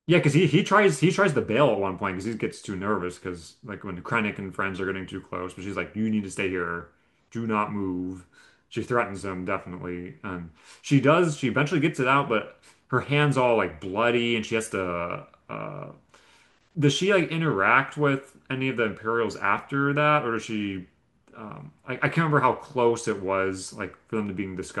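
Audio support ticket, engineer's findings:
Repeated buffer at 19.58 s in the speech. Brief click or buzz, with one 10 ms slice played twice and a hard join at the repeat. Playback output underran. New audio arrived late, so the last buffer was replayed. Roughly 10 ms of audio lost.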